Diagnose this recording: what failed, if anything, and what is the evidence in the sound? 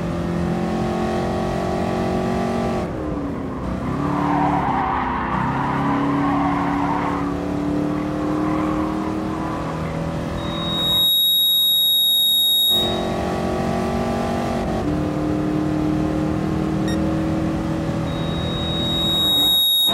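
Loudspeaker feedback squeal: the microphone re-amplifies its loudspeaker until a 3.8 kHz tone swells above the sound, at 10.37–13.19 s and from 18.06 s onward.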